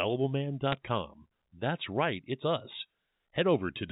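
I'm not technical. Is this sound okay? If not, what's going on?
No. There are bit errors on a digital phone line at about 0.72 s. A few of the ones and zeros carrying the speech got flipped on the way, so single instants of sound jump to wrong values.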